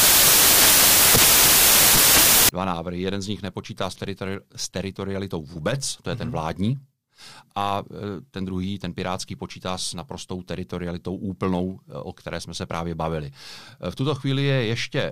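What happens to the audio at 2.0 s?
At 2.0 s you're inside a burst of samples built from the wrong bytes, running from the start to about 2.49 s, just before "dva návrhy". The bytes of each sample get assembled wrongly, so the jittery low bits dominate and you hear loud, harsh broadband noise.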